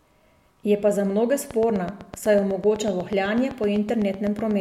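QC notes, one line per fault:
1.51–4.52 s, train of clicks: about thirty near-identical ticks at a steady 8 per second, peaking roughly 5 dB above the speech and continuing through pauses, likely interference from nearby equipment or a faulty connection or power supply; the even spacing and repeated shape separate it from random crackle.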